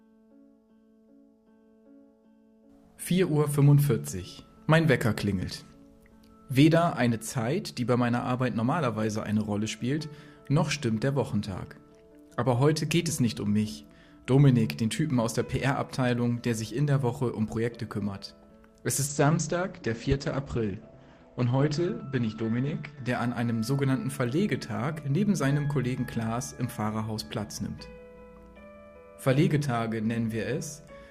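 Adaptive stream at a lower bitrate, from 19.07 s to 23.07 s: for four seconds the player switches to a much leaner encoding of the same stream, as a player does when the connection slows. The change is abrupt and seamless, with no dropout. The treble vanishes above 8.5 kHz and the top end turns thin, with codec artefacts rising. The quality drop points to a step from roughly 64 kbit/s Opus down to about 12 kbit/s.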